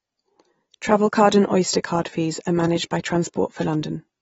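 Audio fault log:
Throughout: AAC compression. The speech sounds dull and smeared, with nothing above 7.6 kHz, so sibilants lose their edge and take on a warbling, fizzy texture. The likely cause is heavy AAC-LC coding, with the damage plainly audible and consistent with a bitrate around 24 kbps. At that rate the encoder drops the top of the spectrum and quantises the remaining frequency lines coarsely against its hearing model, discarding fine detail frame by frame.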